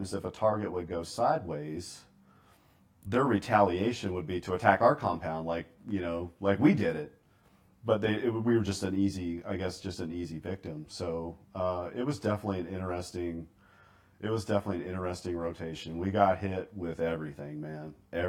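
Channel delay (comb filtering) runs through the whole speech clip. One channel lags the other by around 20 ms before the two are summed to mono. Cancellation carves fixed notches from near 30 Hz, repeating roughly every 50 Hz. The speech sounds rough and slightly doubled.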